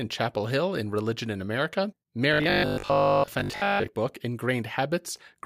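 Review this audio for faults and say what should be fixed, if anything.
From 2.34 to 3.88 s the speech turns into a rigid, metallic buzz pinned at 50 Hz, still loosely tracking the words. This is robotic sound from repeated short buffers, likely caused by audio arriving too slowly, so the playback fills the gaps by looping the last chunk while most of the real signal, roughly two-thirds or more, is skipped. A 50 Hz buzz fits a 20 ms buffer being repeated. Enlarging the jitter buffer or fixing the delivery stall would prevent it.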